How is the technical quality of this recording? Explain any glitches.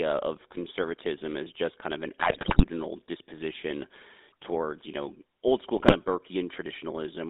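The quality is poor: a clearly coded phone-line sound throughout, broken by two bursts of corrupted decoding.

Throughout, the GSM full-rate codec rebuilds the voice from a coarse vocal-tract model and sparse pulse excitation, which fits a 13 kbps link. The band is roughly 250 Hz to 3.7 kHz, with a plainly buzzy, gravelly roughness.

From 2.18 to 2.65 s and again from 5.76 to 5.93 s, GSM bit errors corrupt the decoder's filter, pitch and gain values, so the speech breaks into squawks, pops and gargling.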